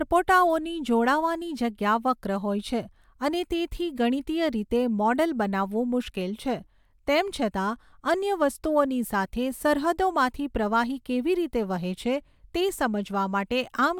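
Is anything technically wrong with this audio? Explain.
No, nothing technically wrong can be heard anywhere in this speech recording.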